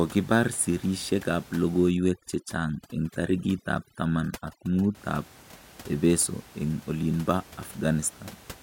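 From 1.91 s to 4.95 s, overdone noise removal sets in: the noise reduction is pushed too hard, so individual frequency bands that sit close to its noise estimate get pulled far down or switched off entirely, taking the quieter parts of the speech with them. The room noise, about 22 dB below the speech, drops and breaks up into twinkling specks until the processing eases at 4.95 s.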